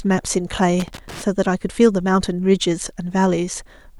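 At about 0.8 s a burst of loose connector crackle starts and runs to roughly 1.22 s. A worn or dirty contact is making and breaking as it shifts, chopping the speech into an irregular scratchy rattle.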